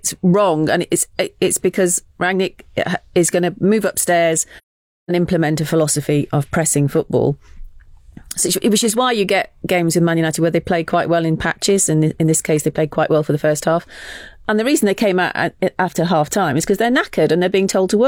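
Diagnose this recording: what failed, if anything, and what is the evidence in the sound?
Codec stage, AAC frame loss with muting: a soft-edged hole from 4.57 to 5.11 s after "going to move upstairs", which fits about a dozen zeroed frames.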